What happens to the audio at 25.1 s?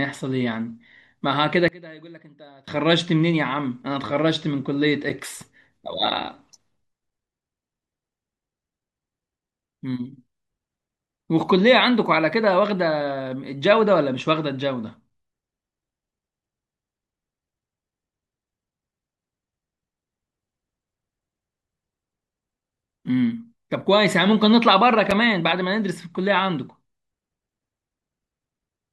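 At 25.11 s there is a gap between chunks. The speech stops for about 6.5 ms at a join between 10-second chunks, leaving a brief hole.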